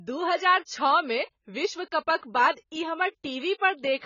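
From start to finish the speech is dull and band-limited, with nothing above 7 kHz. Sibilants sound fizzy and smeared, and held sounds warble. This heavy damage is likely AAC compression, and it fits AAC-LC at a very low bitrate, around 16 kbps.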